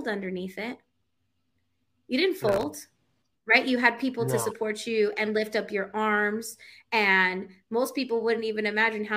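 It's a speech clip with a short burst of processor overload crackle from 2.44 to 2.63 s: the processor misses around ten very short buffer deadlines in a row, each refilled with hard-edged stale audio, which fits buffers under a millisecond. That gives a gritty tear that stops once the load clears.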